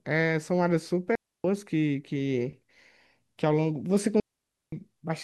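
A digital wireless dropout occurs twice: the receiver lost too much data and muted, leaving clean near-silent holes at 1.15 s (about 0.29 s) and 4.20 s (about 0.52 s), with no noise burst.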